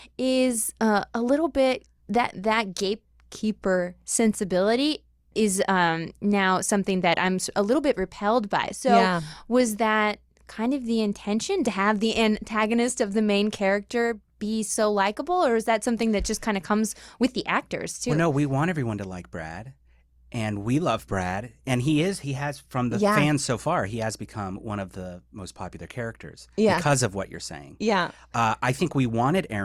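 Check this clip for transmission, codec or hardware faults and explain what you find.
I checked the clip and found no faults to explain.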